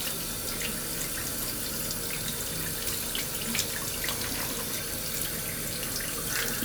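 No technical faults are audible.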